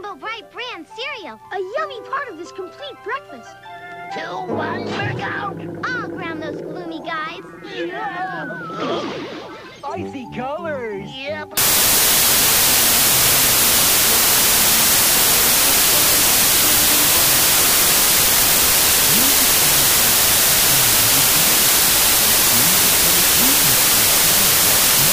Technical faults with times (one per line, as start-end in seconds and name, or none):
11.57-25.12 wrong sample width